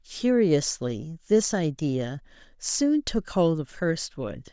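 A short speech recording with no technical fault to report. Nothing in it calls for a time, a value or a cause.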